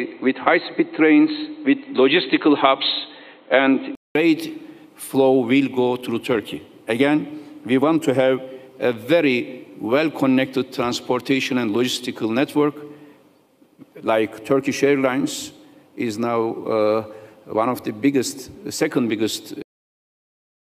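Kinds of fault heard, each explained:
Input switched to a poorer device: until 4.15 s the sound is dull, with nothing above 4.2 kHz, then opens up after a 200 ms gap, likely a device change rather than filtering.
Cut-off end: at 19.62 s the audio stops mid-sound and drops straight to digital silence, with no decay or fade, unlike a natural ending.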